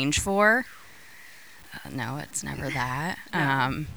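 From start to finish, the speech carries grainy distortion that changes with it. Quiet syllables turn gritty, and fading ends sputter or cut to silence. This is low bit depth without dither, likely from truncation to about 7 bits. The error sits roughly 30 dB below the signal.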